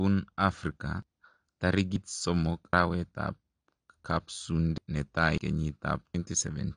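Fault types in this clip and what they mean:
AAC compression: Dull, smeared speech with a fizzy, warbling edge and nothing above 9.8 kHz, likely from AAC-LC coding at a low bitrate near 32 kbps.
dropped buffer (overrun): Six points where the speech jumps ahead, each losing about a tenth or a third of a second, likely from samples being overwritten before they were read.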